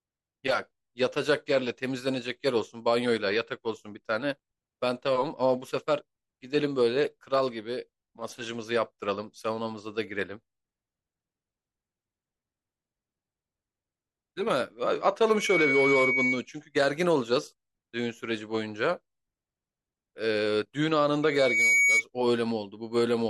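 At 15.28 s a microphone picks up the loudspeaker it is feeding, and around 2.2 kHz the loop gain rises above one, causing loudspeaker feedback squeal. Over roughly a third of a second a pure tone swells into a shrill squeal sitting a few decibels above the speech, lasting until 16.46 s. The same 2.2 kHz loop recurs from 21.22 s to 22.04 s, building a little more slowly before it cuts off.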